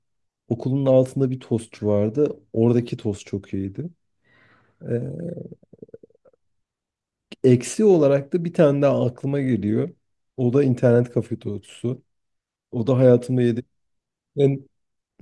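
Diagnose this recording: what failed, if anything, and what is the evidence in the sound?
Nothing stood out on listening through this speech recording.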